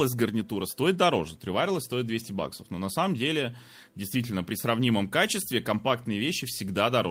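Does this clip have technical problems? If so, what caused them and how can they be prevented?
No, there are no technical problems to report in this speech recording. Nothing in it calls for a fix or any preventive measure.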